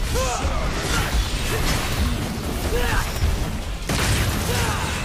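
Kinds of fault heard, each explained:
No technical fault can be heard in this clip. There is nothing here to place under any kind of fault.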